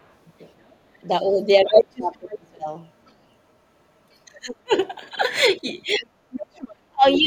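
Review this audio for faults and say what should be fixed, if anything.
A second voice sits under the talker. It is about as loud as the talker from 0.0 to 2.34 s, barely audible at 3.05 to 3.13 s, and clearly weaker at 4.12 to 4.55 s and 5.94 to 7.17 s. This is the other side's voice leaking through, likely loudspeaker echo the canceller left behind.

The talker's voice dips at 1.64 to 2.68 s, 4.27 to 4.74 s and 5.96 to 7.27 s, dropping by up to about 40 dB. This is speech suppressed in double talk, likely because the echo canceller turned everything down while both sides spoke.

Stronger echo cancellation with better double-talk detection, or a headset in place of the loudspeaker, would prevent both.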